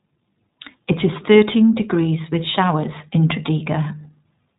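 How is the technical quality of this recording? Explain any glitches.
The technical quality is limited by iLBC codec coding, audible across the whole speech recording. From start to finish the band stops at about 3.8 kHz, so sibilants and breath detail are gone and the sound is muffled and telephone-like. iLBC codes each short frame's excitation independently of the previous one. The plainly audible roughness and slightly synthetic, buzzy grain point to its 20 ms frame mode at roughly 15.2 kbps.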